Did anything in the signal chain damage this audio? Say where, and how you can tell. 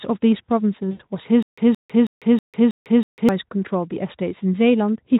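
Yes. Network stage: around 0.91 to 1.01 s the speech turns into a buzzy tone or coloured noise that fades, where VoIP packet loss was concealed by the speech codec. About 80 ms went missing, which fits four lost 20 ms frames. The decoder extended its last pitch and filter with falling gain. A spectrogram shows smeared, repeating harmonics that dim.

Playback stage: from 1.43 to 3.29 s there is a stutter with silent gaps. A 171 ms fragment plays six times at a 321 ms period, with about 150 ms of digital silence between repeats. The likely cause is a stalled stream replaying its last buffer. The waveform shows identical blocks separated by flat silent stretches.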